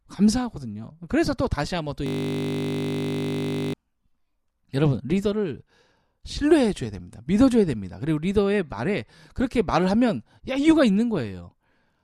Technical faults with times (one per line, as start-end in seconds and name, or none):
2.06-3.73 system hang loop